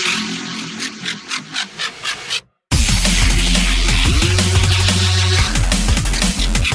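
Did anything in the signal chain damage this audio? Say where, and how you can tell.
No, nothing in the chain audibly damaged this audio.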